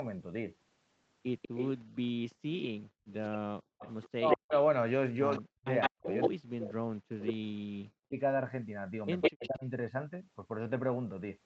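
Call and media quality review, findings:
Echo leak, 1.42–6.28 s, plus short bursts at 7.26–7.33 s and 9.21–9.49 s. A delayed duplicate of the talker trails the original by 160 ms. It sits at roughly speech level in the long stretch, about 5 dB under in the 7.3 s burst, and about 5 dB over at 9.2 s. Likely cause is the far-end AEC letting loudspeaker pickup through. On a spectrogram, harmonic stacks repeat 160 ms later. The waveform shows doubled envelopes.

Background gated by the echo canceller, 1.79–3.11 s. The room tone drops out in brief holes totalling around 0.4 s, with the deepest dip about 39 dB. The AEC suppressor clamps the mic while the loudspeaker is active, then releases. On a spectrogram, the noise floor goes abruptly dark in vertical gaps. The waveform shows flat, near-silent notches between segments, and the floor snaps back afterwards.

Speech suppressed in double talk, 3.81–8.14 s and 9.30–9.65 s. 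The near talker dips and chops while both sides are talking, for roughly 3 s in the first span and 0.3 s in the second. Deepest cuts are around 40 dB. Likely the AEC cannot separate local speech from echo and attenuates both. On a spectrogram, formant bands break off mid-syllable. The waveform shows the envelope collapsing in pieces, all within the band that ends at 8 kHz.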